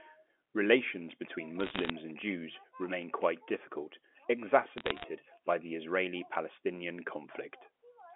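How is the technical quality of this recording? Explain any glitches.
Two brief bursts of crackle affect this speech, which comes through a narrow 250 Hz to 3.5 kHz telephone band. Bit errors on a digital phone line cause both bursts, at 1.6 to 1.9 s and at 4.78 to 5.04 s, just before "by the". Under one percent of the bits are flipped, and each flip corrupts a single G.711 sample, producing sharp ticks. The sound itself never drops out or goes silent, which separates this from packet loss.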